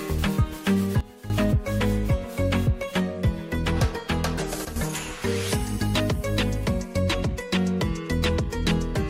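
At 1.0 s the level drops by about 12 dB until 1.3 s, and at 4.65 s it drops by about 10 dB until 4.76 s. Each is a sudden gain jump, likely a gain change applied without a ramp, so sound and background noise step down together.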